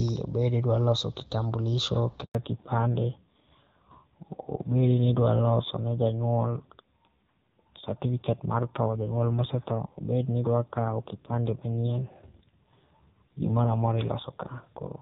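At 2.25 s, right after "loso kitambulisho", a handover gap cuts the speech off for 100 ms, until 2.35 s. The call was being passed between networks and no speech frames arrived during the switch, so the sound dies away quickly and that stretch is simply lost.

From 2.35 s to the end, a fallback to narrowband takes over from the clear HD Voice sound heard before the gap, which fits AMR-WB at 12.65 kbit/s. Nothing above 4 kHz remains, and the speech turns duller and rougher, consistent with a low-rate AMR-NB mode around 5.9 kbit/s.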